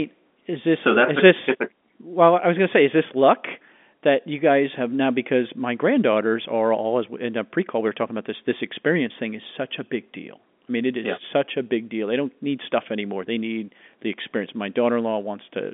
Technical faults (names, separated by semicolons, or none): none